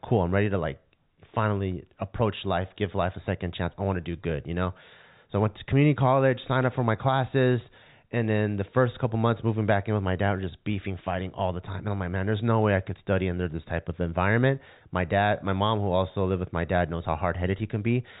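Speech on a G.711 A-law telephone path, band-limited to 4 kHz as that format dictates, with no technical faults found.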